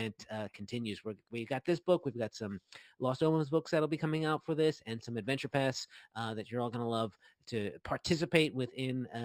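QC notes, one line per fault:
Throughout, imaging from linear upsampling: the top of the band is dulled, and a faint mirrored copy of it, roughly 25 dB below the sound, sits between 6 kHz and 12 kHz, adding a slight metallic shimmer. This fits a 12 kHz source interpolated with straight lines up to 44.1 kHz.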